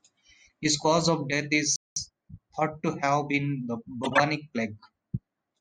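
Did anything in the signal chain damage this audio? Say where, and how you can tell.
Yes. At the playback buffer, the speech cuts to silence just after "cause of death", from 1.76 s to 1.96 s, a gap of about 0.2 s. This is a playback stall. The player most likely ran dry of buffered data or its output thread was blocked, and it resumed after the hold-up.

Straight after the gap, from 1.96 s to 2.36 s, the speech runs about 1.5 times faster at normal pitch. This is time-compressed catch-up in the player. It trims short slices and cross-fades the joins to work off the backlog left by the stall.

In the codec, a short burst of misplaced energy follows "have been the" from 4.04 s to 4.20 s. This is a corrupt frame decoded, in fact a run of roughly seven. Damaged bits gave wrong gains and codes, so energy landed at the wrong frequencies.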